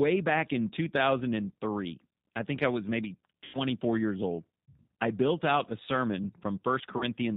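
Throughout, the speech carries G.729 codec damage. The sound is rebuilt from a filter, a pitch predictor and sparse pulses, which fits an 8 kbit/s G.729 stream. Nothing above 4 kHz survives. The voice sounds plainly rough and synthetic.

At 3.45 s, after "think I was maybe", about 90 ms of audio is lost. That fits three dropped packets. The decoder conceals the gap by stretching the last sound into a fading buzzy tone or coloured noise. The voice stays weak until 3.59 s, before "years old I built". At 6.98 s, a 30 ms loss, likely a single packet, gives a shorter concealed smear that lasts to 7.04 s.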